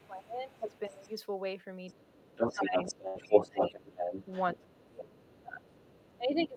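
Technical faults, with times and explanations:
0.0–1.12 s and 1.88–6.57 s, other side's voice leaking through: a second voice sits under the talker, faint at about 30 dB down in the first stretch, then roughly as loud as the talker in the second. It's likely loudspeaker playback the echo canceller didn't fully strip from the mic.
0.08–1.1 s, 2.16–3.76 s and 4.55–6.57 s, speech suppressed in double talk: the talker's level sags while the other voice is present, by about 15, 25 and 20 dB at worst. That's likely the canceller ducking everything because it couldn't separate near speech from echo.
3.07–3.17 s, burst of packet loss: about 80 ms of audio goes missing. The receiver stretches the last sound across the gap and fades it out, so you hear a brief held buzz or hiss before the audio jumps forward.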